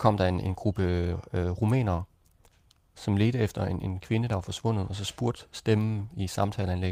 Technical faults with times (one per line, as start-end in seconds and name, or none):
none